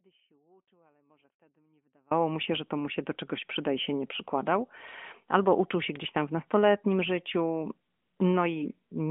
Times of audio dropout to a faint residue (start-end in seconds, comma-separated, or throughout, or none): 0.00-2.11